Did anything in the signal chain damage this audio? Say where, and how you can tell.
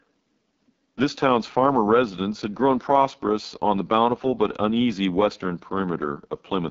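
Yes, at the codec: the whole clip is AMR wideband (HD Voice), rough and raspy with nothing above 7.5 kHz, which fits AMR-WB's lowest 6.6 kbit/s mode starving its excitation model.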